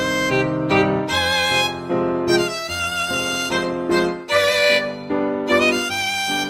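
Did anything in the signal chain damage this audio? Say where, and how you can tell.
Yes, at the network stage: an adaptive stream at a lower bitrate. From 2.67 s the music abruptly gains codec artefacts without any gap, consistent with Opus dropping from 64 to 24 kbit/s.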